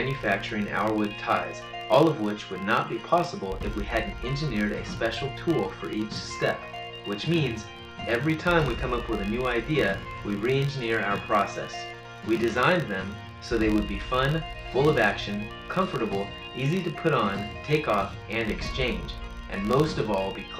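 Filter restarted on every block, throughout the clip: a filter loses its stored state at each block boundary and begins again from silence, leaving a small transient each time. These repeat as a buzz at about 46.9 Hz, which fits 1024-sample blocks, rising and falling with the sound's level.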